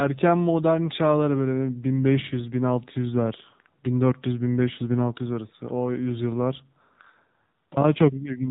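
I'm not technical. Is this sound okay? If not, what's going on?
No. The whole clip has the AMR narrowband mobile codec sound: nothing above 4 kHz, plus a buzzy, synthetic edge that simple muffling wouldn't add.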